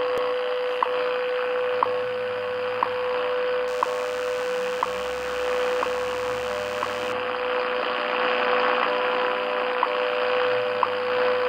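From 3.68 to 7.13 s a steady, thin buzz sits well below the main sound, pitched at 100 Hz and rich in harmonics. It is DECT cordless phone buzz: a nearby handset or base pulses radio every 10 ms, and the audio circuitry rectifies those bursts.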